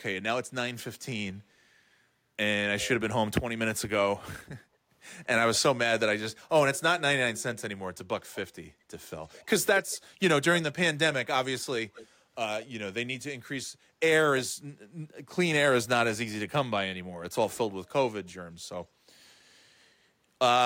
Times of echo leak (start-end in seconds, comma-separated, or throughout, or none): 8.32-8.38, 9.25-9.46, 9.75-9.98, 11.94-12.07